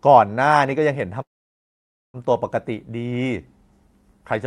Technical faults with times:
1.21-2.17 call audio freeze

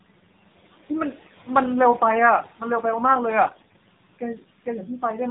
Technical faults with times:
0.00-5.31 noise suppressor artifacts
0.00-5.31 AMR narrowband mobile codec
3.46-3.82 AMR bit errors

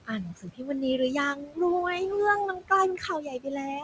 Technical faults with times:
0.00-3.84 noise suppressor artifacts
0.05-1.59 speech cut by the noise suppressor
2.97-3.84 speech cut by the noise suppressor

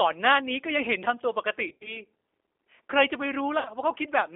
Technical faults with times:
0.00-4.36 G.729 codec
1.69-2.02 VoIP packet loss concealed by the speech codec
3.59-3.71 VoIP packet loss concealed by the speech codec

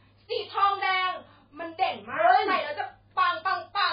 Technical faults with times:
0.00-3.92 MP3 compression

